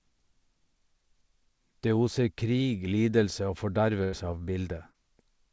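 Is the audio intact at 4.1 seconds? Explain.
No. From 4.04 to 4.14 s there is a burst of packet loss. About 84 ms of the gap is filled by the receiver extending the last sound and fading it down, so it comes across as a brief held buzz or dying hiss. About 80 ms of the speech is simply skipped when playback resumes. On a spectrogram, already empty above 8 kHz from the G.722 call path, the harmonics flatten into smeared horizontal bands. The waveform's envelope tapers before an abrupt restart.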